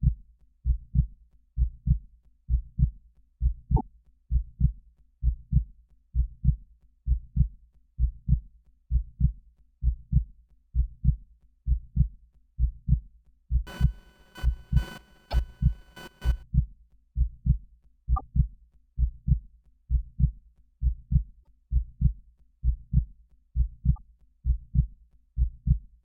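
A recording of everyday sounds with two kinds of fault. Short chirps and blips at 3.73–3.81, 15.28–15.34, 18.13–18.21, 21.40–21.43 and 23.92–23.98 s come from damaged data in a compressed stream. Corrupted frames there make the decoder lose sync and skip ahead to the next frame. From 13.67 to 16.43 s there is computer activity noise. It is a buzz pulsing at around 500 Hz, roughly 25 dB below the sound. Processor or graphics load shifting the shared ground causes it. It follows the machine, not the audio.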